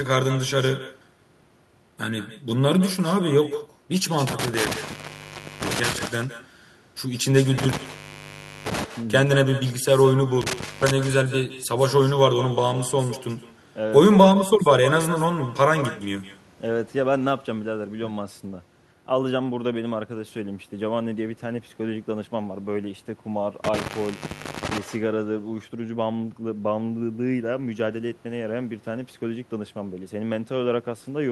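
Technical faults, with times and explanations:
Throughout: echo with no canceller. Every phrase is trailed by a faint, thin copy of itself arriving roughly 150 ms later and about 15 dB below the direct speech, so syllables sound doubled and smeared. The far end is playing the call through a loudspeaker, its microphone is picking that playback up, and no echo cancellation removes it before it travels back. The delay comes from the network round trip plus the room.
4.27–6.07 s, 7.58–8.84 s, 10.41–10.91 s and 23.64–24.78 s: intermittent contact. In each stretch the speech drops out abruptly, with crackle where the signal breaks and returns, leaving only faint hiss while it is gone. The gaps last about 0.88 s, 0.88 s, 0.29 s and 0.79 s. A loose cable or plug in the audio chain is opening momentarily, so the signal path is interrupted until the connection closes again.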